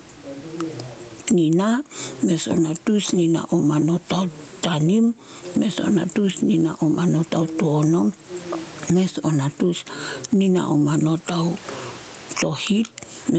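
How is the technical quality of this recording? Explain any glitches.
The main problem is gain pumping, audible from start to finish of the speech. The room noise sits well below the speech, and the sound tops out around 8 kHz.

Throughout, the level pumps up and down with the speech, with a gain swing of around 20 dB. The likely cause is input gain set far too high, with a fast limiter or compressor clamping down on each loud syllable and releasing in the gaps. The result is squashed, even-sounding speech. Unlike a noise gate, the background never cuts to silence.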